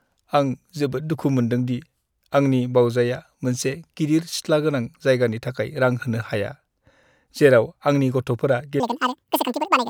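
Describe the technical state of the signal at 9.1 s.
At 9.1 s we're inside a stretch of audio read two samples at a time (double speed), running from 8.8 s to the end, right after "आंनि गथ'फोरा". The reader is taking sample pairs as single frames, so the speech plays at 2x, an octave up.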